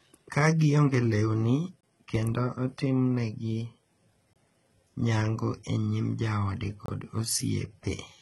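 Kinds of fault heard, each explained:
HE-AAC compression: The treble sounds synthetic and gritty, and nothing is present above 11.8 kHz. S sounds come out metallic and lispy. This likely comes from HE-AAC, which rebuilds the upper band from copied lower bands. The heavy damage fits a bitrate near 16 kbps.
Gap between chunks: Silences of about 25 ms cut the sound at 1.81, 4.33 and 6.86 seconds, one every 2.5 seconds. They fall after "gionge lewni" and before "kendo itimonegi", and after "nyango e nyim joode".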